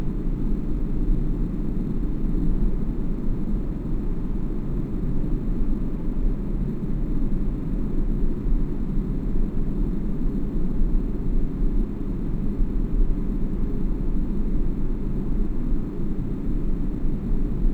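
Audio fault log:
throughout imaging from sample-and-hold upsampling: samples repeated unsmoothed from 22 kHz to 48 kHz mirror the band into 11 to 22 kHz, about 39 dB down. A spectrogram shows a reflected copy, heard as metallic fizz that follows the sound.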